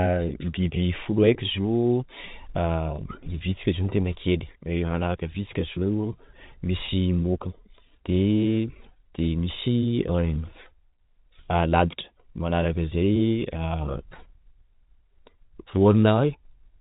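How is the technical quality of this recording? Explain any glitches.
Two brief glitches, both packet loss with pitch repetition, interrupt this telephone-band speech. The G.711 coding cuts everything above 4 kHz.

At 2.96–2.98 s and again at 6.86–6.88 s, about 20 ms of audio drops out each time, which fits one lost packet per event. The receiver bridges each gap by repeating the last pitch period, so you hear a momentary held, buzzy stutter. On a spectrogram the harmonics freeze into flat horizontal stripes. The waveform shows repeated, fading cycles.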